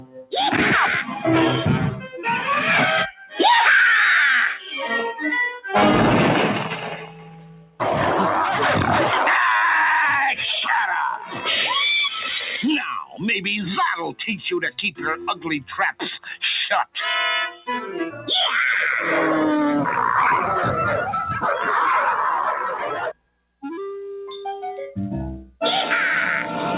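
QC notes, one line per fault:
throughout, noise suppressor applied to music or sounds: a speech-tuned suppressor treats held tones and decays as noise, so level swings by around 5 dB and the sound pumps and thins. The waveform envelope breathes between onsets; spectrogram shows sustained bands dimming after each attack, all below a 4 kHz ceiling that fits the G.711 mu-law call path.
0.00–0.35 s, 2.00–3.39 s, 6.96–7.81 s, 11.15–11.47 s, 12.79–13.22 s, 14.13–18.28 s, 22.74–23.63 s, sound cut by the noise suppressor: steady or fading material is pulled down by about 12 to 18 dB (deepest about 18 dB at 0.00 and 22.74 s, about 17 dB in the long 14.13–18.28 s stretch). The suppressor misreads it as noise, so tails end early. The waveform shows sudden envelope dips, and the spectrogram shows energy going dark between transients.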